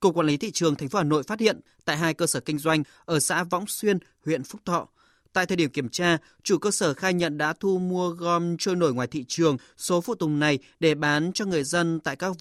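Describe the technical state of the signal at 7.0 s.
At 7.0 s the speech signal is intact, with no audible dropout, distortion, noise burst or other technical fault at that point.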